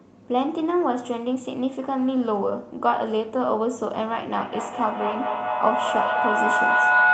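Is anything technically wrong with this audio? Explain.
Yes. A feedback howl starts at 4.37 s and runs to the end of the clip. Two devices in the same room appear to share the call, so the microphone picks up the loudspeaker's output and sends it around again, louder each pass. Instead of dying away, the repeats build and narrow to a tone around 1.5 kHz, with the loop repeating roughly every 200 ms, peaking about 7 dB above the speech.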